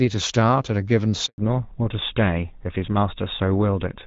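At 1.26 s the speech cuts out in a handover gap: the call is being passed to another network, and for 120 ms, until 1.38 s, no speech frames get through. The sound drops away quickly, there's a brief silence, and whatever was said in that stretch is gone.

From 1.38 s to the end there's a fallback to narrowband. The call leaves AMR-WB at 12.65 kbit/s, where it sounded fairly clean with only light codec damage, and drops to GSM full rate at 13 kbit/s. Everything above 4 kHz disappears, so the speech turns duller and rougher.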